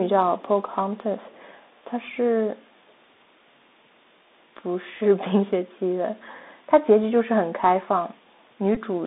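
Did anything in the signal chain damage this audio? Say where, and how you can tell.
Yes. The whole clip sounds narrow and grainy: nothing above about 3.7 kHz or below 200 Hz survives, s sounds are scratchy, and a granular hiss sits under the speech. This is the Bluetooth CVSD headset codec, a one-bit delta coder whose adaptive step cannot keep up with fast high-frequency movement, consistent with a 64 kbit/s link.

A small tick at 5.00 s and a brief buzzy stutter at 8.75 s come from a Bluetooth headset packet repeated on the radio link. The decoder replayed the previous packet's bits. At 5.00 s this points to a single lost packet of about 3.8 ms. At 8.75 s roughly 15 ms went missing, about four repeats in a row, which produces the short buzz.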